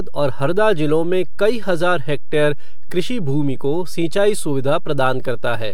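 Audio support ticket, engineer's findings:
DC offset across the whole speech clip, about -16 dBFS. Constant shift off zero, inaudible itself, but eats headroom and sits as steady energy at the very bottom of the spectrum.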